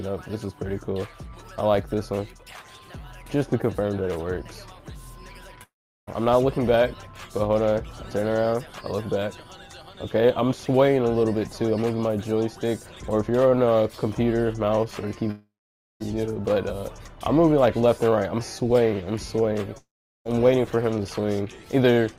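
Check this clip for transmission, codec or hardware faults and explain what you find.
There is one fault type, occurring three times: gaps at 5.63–6.09 s, 15.31–16.02 s and 19.78–20.27 s. Each begins with a brief fading buzz or hiss, then silence for about 0.38, 0.52 and 0.40 s before sound resumes further on. This is likely a long network dropout, where the receiver extended the last audio, then ran dry, losing roughly 0.44, 0.70 and 0.48 s of content.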